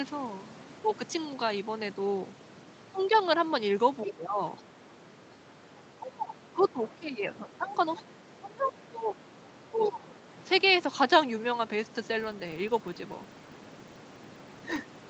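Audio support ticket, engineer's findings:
Speech level ducks and thins at 4.05–4.42, 4.7–7.79, 8.03–9.24 and 9.52–10.02 s, dropping about 10 to 20 dB. Likely speech suppressed in double talk: the echo canceller cannot separate near talker from loudspeaker echo and attenuates both.

Brief foreign-voice scraps at 6.62 s and 7.97 s, about 25 dB under the speech. Likely the other side's voice leaking through: residual loudspeaker echo the canceller failed to subtract.

Steady 25 Hz buzz tracking speech level from 12.04 s to the end. Likely filter restarted on every block: state reset each block adds a transient every 40 ms.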